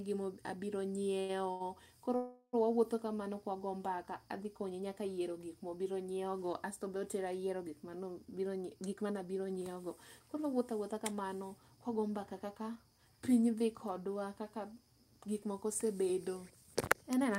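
Speech, with timing faults from a call link. Two short stalls from a late packet come early, at 1.19 to 1.31 s and 1.51 to 1.62 s. Each time a packet was late and the jitter buffer ran dry. The receiver held the last sound for about 94 ms and then 92 ms, then carried on from the same point. Nothing is lost. The sound simply hangs a moment too long, with a faint buzz or dip. A longer call audio freeze follows from 2.16 to 2.55 s. The last sound is drawn out and fades, and roughly the final 70 ms is silent. The whole hold lasts 370 ms. The likely cause is packets held up in transit, which emptied the buffer until they arrived. Afterwards the audio picks up where it stopped, so a gap has been inserted and nothing is missing. Two jitter buffer speed-ups come later. From 8.25 to 13.06 s, just before "piny dhi kodwa kaka", the speech runs at 109 percent. After "dhi kodwa kaka gik", from 15.50 to 17.34 s, it runs at 106 percent. 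The buffer held more audio than it aims for. To shrink it, the receiver cut many tiny pitch-period slices, about 0.4 s in the first stretch and around 0.15 s in the second. The pitch stays the same, but the delivery sounds hurried.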